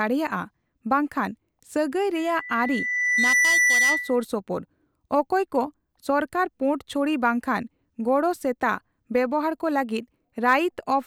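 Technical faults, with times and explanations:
2.16–4.25 s, loudspeaker feedback squeal: a pure tone at 2 kHz rises out of the speech, swelling over roughly a second until it sits a few decibels above the speech, then holds until it cuts off at 4.25 s. The microphone is picking up the loudspeaker it drives, and at 2 kHz the loop gain has passed unity, so each trip around the loop reinforces that one frequency and it grows by itself into a steady squeal.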